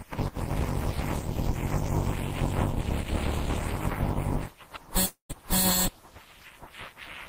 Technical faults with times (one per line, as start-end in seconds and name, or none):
5.05-5.32 long network dropout